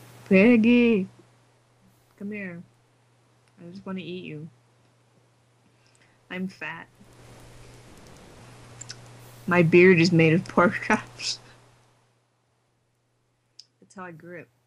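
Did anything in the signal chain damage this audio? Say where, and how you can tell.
Yes. Zipper noise appears at a digital gain stage, in the driver or buffer processing, from 0.3 to 1.6 s. A fast ticking rides on the sound as the level drops by roughly 15 dB. It moves in 1 dB steps, about 20 per second, with no smoothing, so each step clicks.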